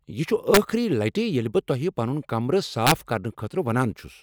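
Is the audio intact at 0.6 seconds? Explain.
Yes, though only just: an integer overflow runs from 0.54 to 0.57 s, between "یہ چھ" and "لٹہ ییٚلہ". Peaks pushed about 1 dB past the largest integer wrap to the opposite sign instead of being limited, giving violent cracks far sharper than clipping's flattened, buzzy distortion.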